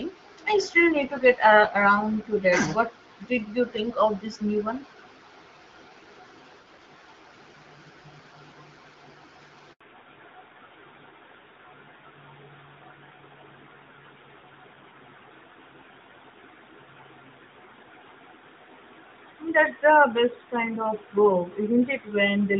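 At 9.73 s the call is handed from one network to another, and no speech frames arrive during the switch. This handover gap silences the speech for 80 ms, until 9.81 s, and whatever was said in that window is lost.

From 9.81 s to the end, the call falls back from HD Voice to an older codec. This fallback to narrowband removes everything above 4 kHz, which fits a move to AMR-NB at 12.2 kbit/s, so the speech turns duller and rougher than the lightly coded wideband sound before it.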